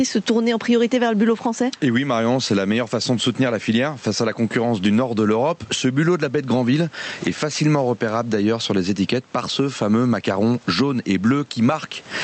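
Gain pumping runs throughout. Background noise swells in pauses and ducks about 10 dB under loud speech, likely from excessive gain feeding a fast limiter.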